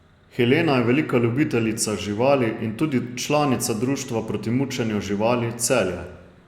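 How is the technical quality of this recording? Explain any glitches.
No audible technical faults.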